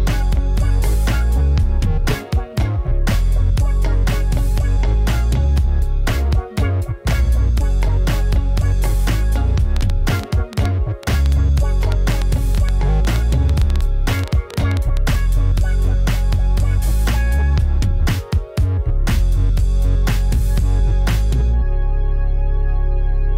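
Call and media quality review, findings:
Train of clicks, 9.77 to 15.10 s. Likely cause: interference from nearby equipment or a struggling interface injecting repeated pulses. Around thirty near-identical clicks at an uneven pace, averaging 5.8 per second, peaking roughly 10 dB above the sound. Heard as ticking over the audio, including in pauses.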